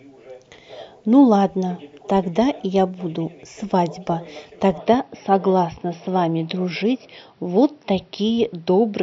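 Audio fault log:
4.79 to 9.03 s, input switched to a poorer device. At 4.79 s the speech turns duller and boxier, and stays that way to the end. Nothing above 5.8 kHz gets through after that point, so the crisp top of the sound is gone. There is no gap at the switch, and the level barely moves. A faint new background noise sits far below the speech. The input likely changed to a narrower-band microphone or headset.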